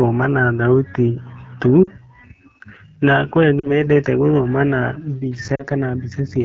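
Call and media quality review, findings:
AMR wideband (HD Voice) codec, entire clip: rough, raspy speech with a hissy, noise-filled top band. This fits AMR-WB at one of its two lowest rates, likely 8.85 kbit/s, where the sparse pulse excitation cannot carry the speech cleanly up to 6.4 kHz.

Lost AMR speech frames at 1.83–1.90 s (after "na thauti tu"), 3.60–3.83 s (between "na kwĩ" and "gũthoma na"), and 5.55–5.64 s: brief smeared dips as the decoder repeats the last good pitch and vocal tract state at falling gain. Each event fits about 40 ms of lost frames.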